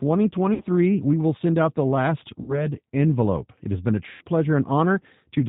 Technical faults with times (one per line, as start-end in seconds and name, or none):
0.00-5.48 G.729 codec
0.54-0.63 VoIP packet loss concealed by the speech codec
2.42-2.67 VoIP packet loss concealed by the speech codec
4.09-4.24 VoIP packet loss concealed by the speech codec